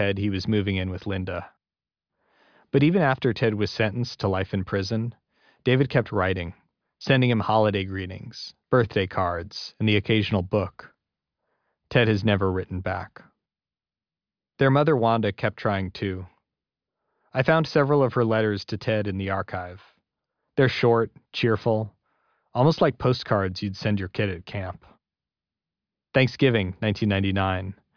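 Nothing in the recording stood out as a technical problem on listening.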